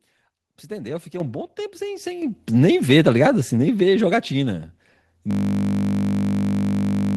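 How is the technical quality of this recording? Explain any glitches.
The recording has two technical problems: the input level jumps up twice early on, and the last part of the clip collapses into a buzzing loop.

At 1.2 s and again at 2.22 s, the microphone volume is stepped up, each time by about 7 dB. This is the behaviour of automatic gain control in call software that judges the microphone too quiet and raises the device input volume in a single increment instead of ramping it. Because the change happens at the input, the speech and the background noise floor jump louder together, with no fade between the two levels.

From 5.31 s to the end of the clip, the audio falls into a system hang loop. The computer or its audio driver stopped supplying new data, while the sound hardware kept replaying the same ring buffer. The repeated segment is 20 ms long, which fits a buffer of that duration. 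Cycling at 50 Hz, it no longer sounds like speech but like a steady low buzz, and it continues until the recording ends.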